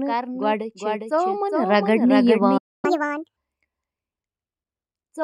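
Speech runs for about 5 s with a doubled audio track throughout. A second full-band copy sits about 0.4 s behind the first and about 5 dB quieter, most likely from the signal being captured again through a slower path. On a spectrogram every syllable's pattern repeats, fainter and shifted right. There is no reverb tail, and the copy's edges are abrupt. At 2.57 s a playback stall cuts the sound mid-flow until 2.85 s. This is a flat-line gap in the waveform and a blank vertical band in the spectrogram, consistent with the player running out of buffered data or its thread being blocked. From 2.85 to 3.36 s a catch-up at higher speed follows. The player resamples its backlog at 1.5 times normal speed, raising pitch by about seven semitones. Harmonics and formants show stretched upward on the spectrogram and waveform cycles compressed, until both drop back to normal.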